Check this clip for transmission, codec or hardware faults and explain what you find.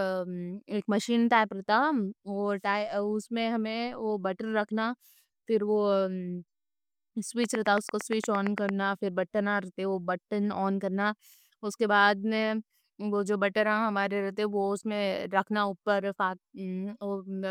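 One fault is present, a train of clicks from 7.44 to 8.70 s. Pulses of much the same shape repeat at a regular rate of about 8.8 per second, roughly ten in all, standing around 15 dB above the speech. The likely cause is something injecting a pulse over and over, such as interference from nearby equipment or a faulty connection or power supply. It is heard as a steady ticking or popping laid over the speech.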